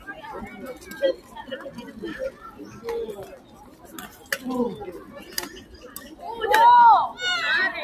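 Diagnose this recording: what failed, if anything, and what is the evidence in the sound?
Call processing: a noise suppressor applied to music or sounds pumps throughout, its gain swinging by roughly 15 dB. Held sounds sink and tails are cut, which shows as a breathing waveform envelope and chopped spectrogram decays.

Sound cut by the noise suppressor at 1.17–1.35, 2.31–2.62, 3.33–4.31 and 5.57–5.9 s, dropping about 7–9 dB. These appear as sudden dips in the waveform and dimmed spectrogram bands.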